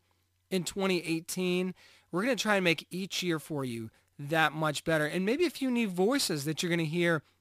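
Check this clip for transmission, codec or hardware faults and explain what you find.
One fault runs through the whole speech clip: crude rate conversion. Samples are simply dropped rather than filtered, which fits a 48 kHz to 44.1 kHz change. The resulting error, roughly 25 dB below the speech, forms a gritty, inharmonic fizz on loud and bright sounds. Unlike clipping, it is not tied to peaks.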